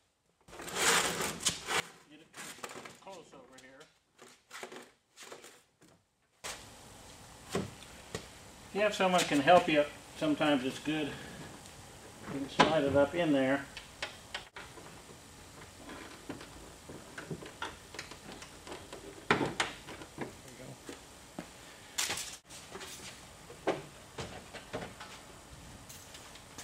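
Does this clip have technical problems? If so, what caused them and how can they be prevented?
Yes. There are two sudden gain jumps, where level and background noise step up together in one instant: at 0.48 s by about 19 dB, falling back at 1.8 s, and at 6.44 s by about 24 dB, holding to the end. The likely cause is a digital gain setting or bit shift applied without a ramp. Prevent it by smoothing every gain change over several milliseconds.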